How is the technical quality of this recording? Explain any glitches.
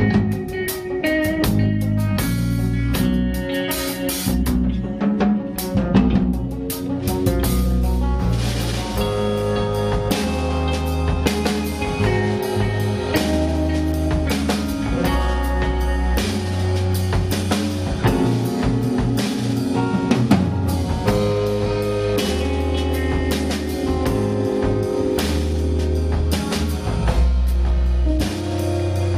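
Nothing in the recording stood out as a technical problem on listening.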